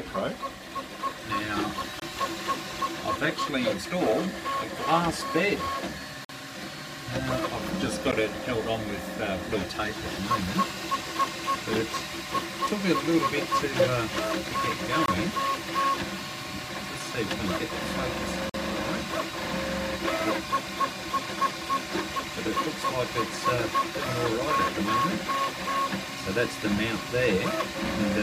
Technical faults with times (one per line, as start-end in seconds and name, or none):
2.00-2.02 block of digital silence
6.25-6.29 block of digital silence
8.12 block of digital silence
15.06-15.08 block of digital silence
18.50-18.54 block of digital silence